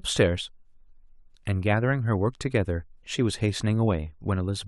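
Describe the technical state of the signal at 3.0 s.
At 3.0 s the speech signal is intact, with no audible fault at that moment.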